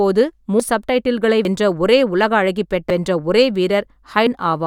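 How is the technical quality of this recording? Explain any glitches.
The recording is interrupted by four abrupt skips. At 0.60, 1.45, 2.90 and 4.27 s the speech jumps forward, losing roughly 0.10 to 0.15 seconds each time, with no gap. This is likely a dropped buffer (overrun): audio was overwritten before capture, splicing the remaining sound directly together.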